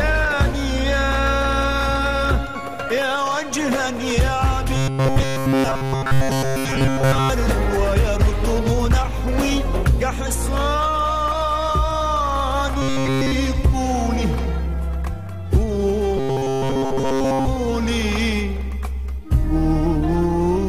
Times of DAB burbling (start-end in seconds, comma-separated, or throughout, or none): none